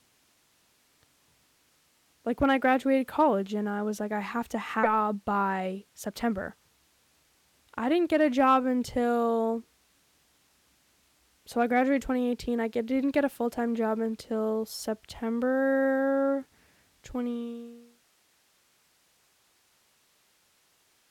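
Right after "like I have to", at 4.83 to 4.85 s, there's a skip ahead. Around 0.4 s of speech never got played, probably dropped when the jitter buffer overflowed. Playback just jumps forward with no gap, so the two sides butt together and the phrase sounds clipped short.

Straight after, from 4.93 to 6.73 s, you get a jitter buffer speed-up. The receiver kept cutting tiny pitch-period slices to drain its backlog, about 0.2 s in total, so the speech runs roughly 11% fast at unchanged pitch and comes across a bit rushed.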